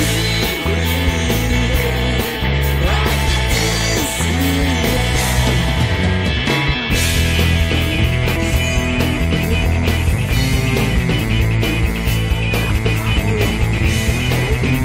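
At 8.35 s, compressed frames are skipped: a short run of encoded frames never reaches the output, either because they are missing from the stream or because the decoder rejected them as damaged. The sound jumps forward by about 150 ms, roughly seven frames at a frame length near 21.3 ms.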